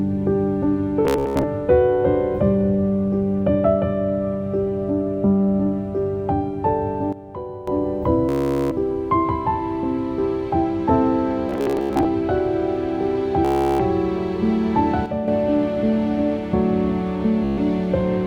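The audio suffers from repeated Bluetooth stutter at 1.05 to 1.43 s, 8.29 to 8.71 s, 11.49 to 12.05 s, 13.45 to 13.80 s and 17.44 to 17.58 s. Each time, the receiver ran short of data and replayed its last short slice, so the sound turns into a buzzing, machine-gun repeat before jumping ahead as if it had kept playing. The missing material totals about 0.29, 0.42, 0.33, 0.35 and 0.13 s, and in the first and third bursts it is scattered in runs of up to 87 ms, which fits packets of roughly 15 ms going missing. On a spectrogram these spans look like vertical comb-like striping of identical columns, and the waveform shows a short block copied end to end. Separately, the level drops abruptly by about 12 dB from 7.13 to 7.68 s and by about 7 dB from 15.06 to 15.28 s, with sound and background noise falling together and recovering just as suddenly. This is a sudden gain jump, likely a digital gain change applied instantly without a ramp. 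The waveform envelope shows square-edged steps, often marked by a click, and the spectrogram shows the whole band darkening evenly at once.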